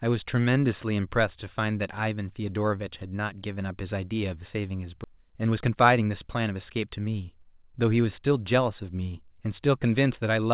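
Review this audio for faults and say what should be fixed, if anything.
At 5.04 to 5.06 s there is a skip ahead. Playback jumps forward with no fill, and about 0.7 s of speech is simply absent, so the material on either side of the jump is butted together almost directly. The jitter buffer discarded a stretch of audio, most likely on overflow, while later packets were already queued, cutting the playout delay by roughly the same amount. Prevention: size the jitter buffer for the burst arrivals and shed excess delay gradually instead of dropping a block.

From 5.14 to 7.21 s there is a jitter buffer speed-up. The speech runs at about 113% of normal rate with unchanged pitch and sounds hurried. About 0.3 s in total is taken out as short pitch-period-length pieces, removed repeatedly to pull the buffer back toward its target depth. The band-limited sound, with nothing above 4 kHz, fits a G.711 mu-law call path and is separate from this fault. 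Prevention: cap the time-compression rate so delay is recovered over a longer span.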